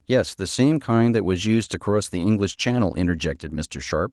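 No technical faults can be heard in this speech recording.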